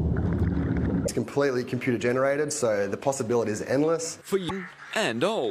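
Two brief glitches, at 1.03 to 1.09 s and 4.46 to 4.51 s, point to damaged data in a compressed stream, where corrupted frames make the decoder lose sync.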